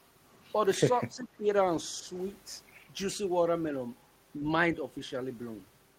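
Mains hum runs the whole way through: a steady 50 Hz tone, sitting roughly 20 dB under the speech, from a ground loop or transformer coupling in.

From 1.11 to 1.46 s the talker dips by up to around 10 dB, likely speech suppressed in double talk as the echo canceller ducked the talker along with the echo.

Inside that, from 1.19 to 1.24 s, there's a faint scrap of echo leak, a copy delayed 380 ms and very quiet, likely uncancelled loudspeaker pickup.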